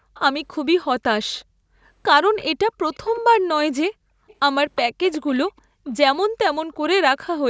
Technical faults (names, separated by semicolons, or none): echo leak; background gated by the echo canceller